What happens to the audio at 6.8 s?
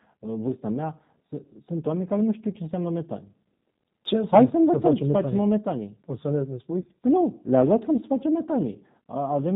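From 6.81 to 6.84 s there is VoIP packet loss concealed by the speech codec. About 20 ms of audio is missing, which fits two lost 10 ms frames. The decoder extrapolates from its last pitch and filter settings while lowering the gain, so the sound thins into a brief buzzy tone or coloured noise that fades. It stays weak or distorted for tens of milliseconds after. Underneath, the G.729 codec at 8 kbit/s is plainly audible. It removes everything above 4 kHz and rebuilds the speech from a few pulses per frame, which gives it a rough, synthetic edge.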